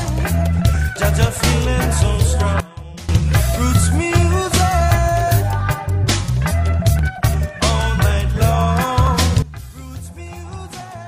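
At 2.60 s the level drops abruptly by about 18 dB, sound and background together, and recovers at 3.09 s. From 9.42 s to the end it drops again, by about 17 dB. Both are likely a sudden gain jump, applied without a ramp.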